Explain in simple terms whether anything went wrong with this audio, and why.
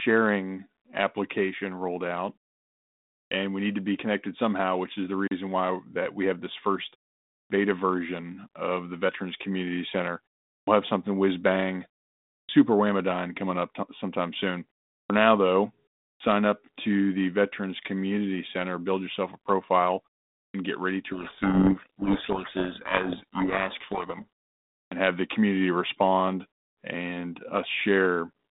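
Two things went wrong. The first is a clipped start after a pause, which happens eight times: at 3.26, 7.45, 10.62, 12.43, 15.04, 16.15, 20.49 and 24.86 s. After each short silence of 0.35 to 0.95 s, the playback device dozes off and needs a moment to wake, so the first 53 to 60 ms of speech goes missing and each restart sounds abrupt.

The second is a codec payload misread from 21.12 to 24.24 s. The sending and receiving ends disagreed on the bit order inside the G.726 code words, so the decoder read the data scrambled. For those three seconds the speech is buried in harsh distortion until both sides line up again.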